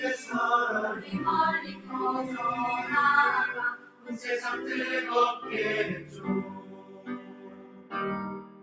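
Across the whole clip a noise suppressor built for speech is acting on non-speech sound. It treats sustained tones, ambience and reverberant tails as noise and pulls them down, so the level swings by about 15 dB as the gain reacts. Onsets survive while anything held sags, giving a pumping, fluttering, thinned-out character. On a waveform the envelope shows sharp attacks followed by unnaturally fast collapses. A spectrogram shows steady partials and tails fading in patches instead of decaying smoothly. The band ends cleanly at 8 kHz from the call's microphone processing.

The suppressor then cuts individual passages harder than the rest. The sound dips from 0.95 to 1.14 s (about 9 dB), 1.62 to 1.94 s (about 11 dB), 3.77 to 4.25 s (about 11 dB), 6.03 to 6.26 s (about 7 dB), 6.44 to 7.94 s (about 11 dB, the longest, roughly one and a half seconds) and 8.36 to 8.62 s (about 11 dB). Each sounds like the sustain or decay being swallowed. 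The waveform narrows abruptly there, and the spectrogram shows dimmed vertical bands across the affected spans.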